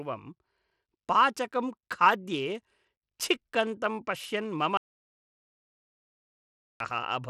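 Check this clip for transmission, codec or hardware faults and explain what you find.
Two faults are audible in this speech recording: a codec coloration across the whole clip and one long gap of dead silence.

Throughout, the top end sounds dull and gritty, with nothing above about 14.7 kHz and a rough, grainy noise riding on the sound. This is plainly audible Bluetooth SBC compression, likely at a low bitrate around 96 kbps. SBC splits the signal into a few fixed sub-bands and shares out bits with no real hearing model, so the upper bands are starved and the rest are coarsely quantised.

From 4.77 s to 6.80 s, right after "पश्यन् मम", the speech stops dead for about 2.03 s. The gap is silent with no room tone, and the speech then resumes abruptly. This is an audio dropout to silence. The input was likely lost for that stretch while the recorder kept writing zeros, so whatever was spoken during the gap is gone.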